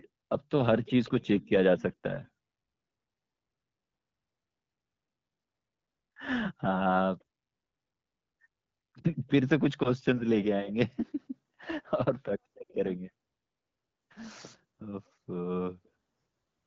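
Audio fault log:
No faults are present; the speech carries the band-limited character of AMR wideband (HD Voice) coding, with content up to 7 kHz, which fits a mid rate such as 12.65 kbit/s.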